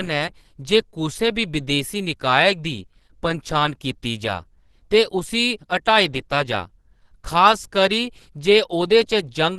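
Opus compression runs throughout. The speech is muffled and hoarse, with nothing above 12.1 kHz, likely from hybrid-mode encoding at a bitrate near 16 kbps.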